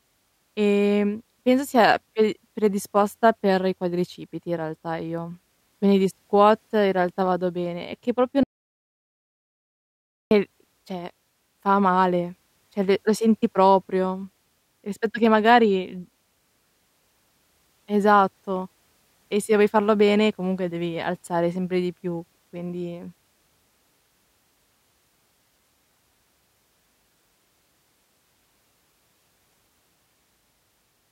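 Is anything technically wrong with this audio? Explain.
Yes. From 8.43 to 10.31 s, an audio dropout to silence removes about 1.9 s of speech. The input was likely lost, leaving silence, with no room tone.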